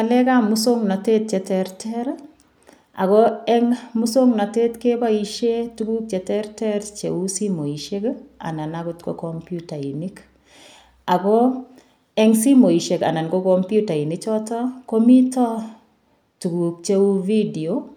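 No technical faults are audible.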